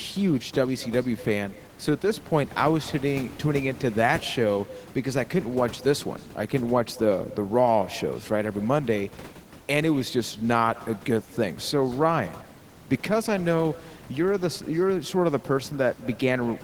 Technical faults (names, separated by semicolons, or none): echo with no canceller